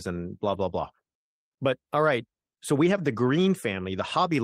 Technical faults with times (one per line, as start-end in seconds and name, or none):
0.49-0.59 lost packet rebuilt from error correction
2.45-2.49 short concealed packet loss